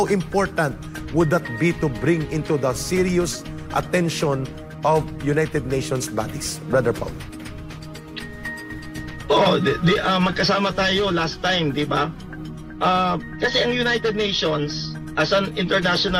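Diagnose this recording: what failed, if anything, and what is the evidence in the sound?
Nothing failed at any stage here: there is no dropout, distortion, glitch or other defect to point to anywhere in the recording.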